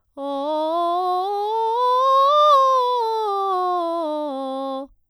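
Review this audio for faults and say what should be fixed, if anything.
Nothing needs to be fixed, as no faults can be heard in this music.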